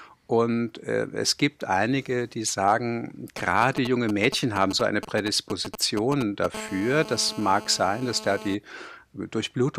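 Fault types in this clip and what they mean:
GSM signalling bursts: A nearby 2G phone is sending only short groups of radio bursts, and the audio circuit is rectifying them into sound. Right after "gibt einige die sagen", from 3.38 to 6.46 s, there is a galloping dit-dit-dit of brief buzzes at 216.7 Hz, roughly 10 dB under the speech. The broken, rhythmic grouping is what separates it from the continuous call buzz that follows.
GSM phone buzz: From 6.54 to 8.55 s the same phone is transmitting continuously, as in a call, its radio bursts arriving 216.7 times a second and being rectified into the audio path. The result is a hard, raspy, harmonic-rich buzz at that rate, about 14 dB below the speech and unrelated to it. Unlike the signalling bursts, it is nearly steady, without the galloping rhythm, for its two seconds.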